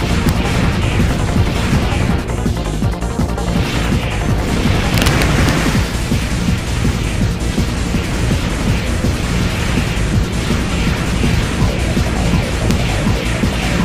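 Integer overflow cracks at 0.29 s, from 4.94 to 5.49 s, and at 12.71 s: peaks exceed the integer limit, about 2 dB over in the middle stretch, and wrap to the opposite sign instead of clipping. This produces violent, sharp cracks far harsher than clipping.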